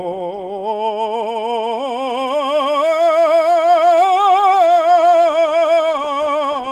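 Nothing technical goes wrong in this short piece of music; there's nothing here to flag.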